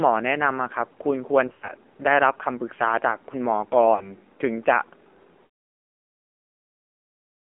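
Throughout the speech, the signal has passed through the AMR narrowband mobile codec. It sampled at 8 kHz and rebuilt each 20 ms frame from a vocal-tract model fed by sparse pulses. The audible band runs only from 250 Hz to about 3.4 kHz. The coding damage is plainly audible as a buzzy, synthetic edge, which fits one of the codec's lower modes, around 7.4 kbps.

From 1.48 to 1.69 s come lost AMR speech frames. Radio errors made frames fail their checks, so the decoder kept repeating the last good pitch and filter settings at falling gain. About 140 ms went missing, spread across 200 ms, which fits several dropped frames. The longest gap is 100 ms, where the sound smears and sags toward silence before returning rough and weak.

From 3.96 to 4.12 s, a shorter loss of about 40 ms, which fits two frames, gives only a brief dip and warble. The fade-out ending near 5.5 s is smooth, with no click.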